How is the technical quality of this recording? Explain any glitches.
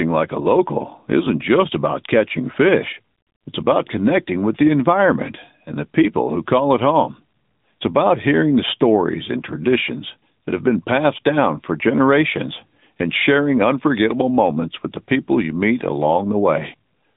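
The quality is poor throughout, with one fault. The whole clip passes through the AMR narrowband mobile codec. Its band is roughly 150 Hz to 3.7 kHz, with nothing above 3.8 kHz. The speech is plainly buzzy and synthetic, consistent with about 10.2 kbps.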